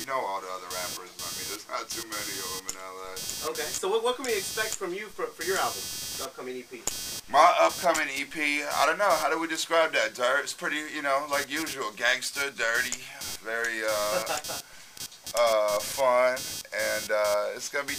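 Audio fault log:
throughout, computer activity noise: a buzzing pulse near 300 per second, about 10 dB below the sound, as processor load shifts the shared ground.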